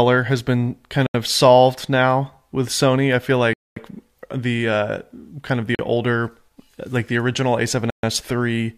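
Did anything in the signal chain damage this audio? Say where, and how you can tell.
Yes. A Bluetooth stall, most likely on the wireless link, drops the speech to silence at 1.07 s (78 ms), 3.53–3.76 s after "I feel", 5.75 s after "uh kind of the", and 7.90–8.03 s, then resumes. The headphone buffer ran dry while delayed packets were resent.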